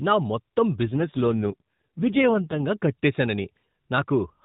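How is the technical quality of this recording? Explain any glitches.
The speech comes through an AMR narrowband phone codec, so it's band-limited to below 4 kHz with light coding roughness. There's also one glitch, an AMR rate drop. From 0.86 to 2.66 s, right after "నా మొత్తం", the speech turns buzzier and more synthetic, with no gap and no change in bandwidth. That's the network pushing the codec down to a lower mode so it can spend more bits on error protection, and the sound fits a fall from 12.2 to 4.75 kbps. It recovers once the rate climbs back.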